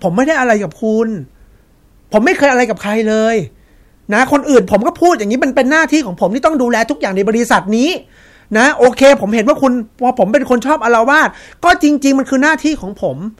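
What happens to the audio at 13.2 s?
Nothing goes wrong at 13.2 s; the speech carries on intact through that moment, with no dropout, click or distortion to be heard.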